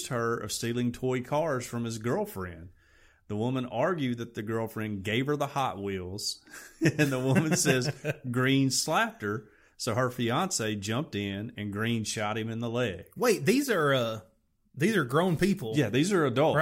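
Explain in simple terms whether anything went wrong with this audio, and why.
Nothing went wrong here.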